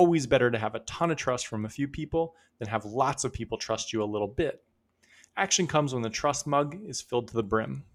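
Listening through the speech recording, nothing stood out as a technical fault at any point.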